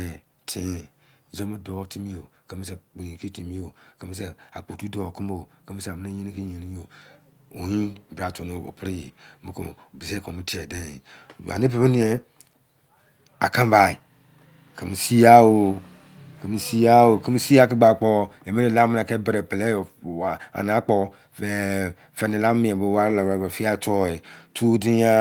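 Nothing in the speech stood out as a technical problem on listening.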